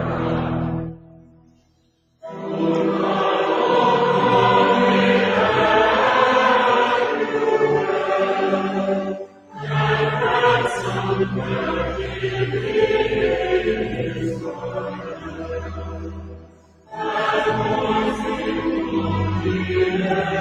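A noise suppressor meant for speech is applied to the music or sounds throughout, treating steady material as noise. Level swings by roughly 15 dB, so held tones pump and thin while attacks survive. Unlike a compressor, it follows steadiness rather than loudness. The sound is cut by the noise suppressor from 0.9 to 2.41 s, 9.17 to 9.68 s and 13.9 to 16.98 s, sinking by up to about 18 dB. Sustained parts and tails collapse there while transients stay intact, which sets these cuts apart from a true dropout.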